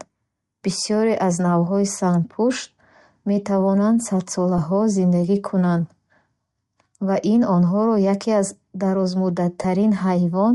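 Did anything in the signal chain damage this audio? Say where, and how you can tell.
Yes. At the codec stage, the speech carries a breathy, grainy edge throughout, likely from Bluetooth LC3 compression at a rate that fits around 48 kbps. A spectrogram shows the upper band as speckled noise fill rather than clean harmonics, where the encoder discarded detail.

Lost LE Audio frames in the wireless link cause brief smeared dropouts at 1.93 s after "аз навъҳои", 4.58 s before "зиндагӣ кунанд", 6.84 s before "ва ин онҳоро яке", and 9.62 to 9.65 s. Each short gap fits one 7.5 ms frame, and the last fits three. The decoder repeats the previous spectrum with scrambled phase, so on a spectrogram the harmonics blur into noisy vertical smudges and the waveform roughens there.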